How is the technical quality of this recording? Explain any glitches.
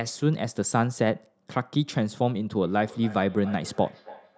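There's one real glitch here, a feedback echo between two devices starting around 2.59 s and running to the end. The speech is repeating about every third of a second, quiet at roughly 19 dB under the voice. Another device in the room is replaying the call and this microphone catches it again; its canceller can't remove sound it didn't play. The top end stops at 8 kHz, which is just the call's microphone processing.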